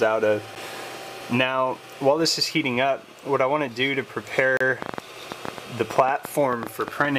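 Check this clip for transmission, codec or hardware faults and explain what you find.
Two kinds of fault are audible: brief dropouts to silence, and a run of clicks near the end.

The dropouts sound like a Bluetooth stall. The first comes at 0.55 s and lasts only about 8 ms. The second runs from 4.57 to 4.61 s, a gap of 34 ms. In both, the sound cuts to silence and then resumes. The likely cause is radio interference delaying packets. The headphones' buffer empties, and playback halts until the resent data arrives.

A train of clicks runs from 4.82 to 7.06 s. There are about twenty clicks, at roughly 8 per second. The spacing is irregular, so it sounds like uneven ticking or popping. The clicks stand about 15 dB above the surrounding sound, which makes them prominent. They are similar in shape, pointing to a single repeating source. The likely cause is interference from nearby equipment or a faulty connection or power supply injecting pulses.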